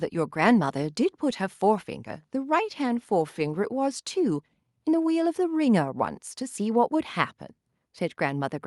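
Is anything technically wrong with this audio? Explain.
No, nothing technically wrong turns up anywhere in this speech recording.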